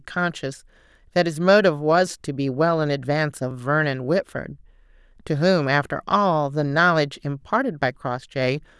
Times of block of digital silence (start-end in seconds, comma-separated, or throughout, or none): 3.51